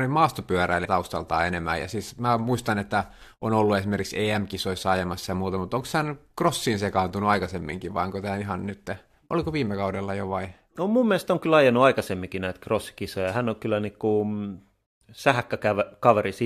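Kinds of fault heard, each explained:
Damaged data in a compressed stream: a brief chirp or blip cuts into the speech from about 0.84 to 0.86 s, lasting only around 20 ms. The cause is a corrupted stretch of the encoded file, with bytes lost, zeroed or overwritten. The decoder misreads the affected frame, loses its place in the bitstream and hunts for the next valid frame header, and that momentary garbled output is what sounds through.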